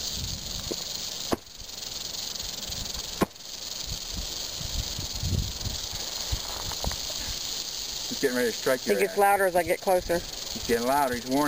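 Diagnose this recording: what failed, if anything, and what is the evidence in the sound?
At 2.29 s the sound jumps forward abruptly, as if a short piece of the timeline were cut out, leaving a small discontinuity at the join. This is compressed frames skipped, at the codec or storage stage: a handful of encoded frames, around 15 ms of audio, were never decoded, either because they were missing from the file or because the decoder rejected them as corrupt. Playback resumes with the next good frame, so the audio advances by that gap.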